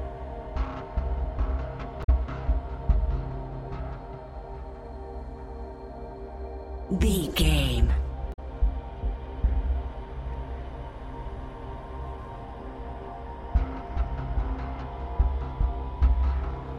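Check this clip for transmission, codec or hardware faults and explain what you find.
Two short faults are present, both from damaged data in a compressed stream, at 2.00 to 2.09 s and at 8.30 to 8.39 s. Each lasts under a tenth of a second. Corrupted bytes in the encoded stream make the decoder misread the affected frames, lose sync and hunt for the next valid frame header. The result is a brief chirp or blip. On a spectrogram each appears as a narrow vertical smear of disordered energy, with an abrupt break in the waveform at each edge.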